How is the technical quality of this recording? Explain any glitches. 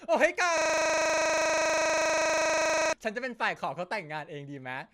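The recording has one serious glitch, which interrupts the speech for over two seconds.

A system hang loop runs from 0.58 s to 2.93 s. The computer or its audio driver stalled, but the sound hardware kept replaying the same ring buffer. A single 40 ms slice of speech repeats exactly, about 59 times, instead of the audio moving forward. Because the slice is so short, it recurs 25 times a second and comes across as a buzz or rapid stutter until normal playback resumes.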